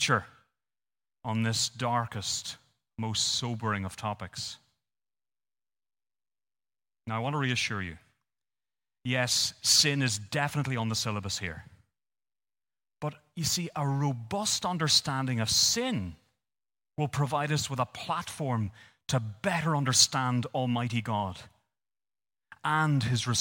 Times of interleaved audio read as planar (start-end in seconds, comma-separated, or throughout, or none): none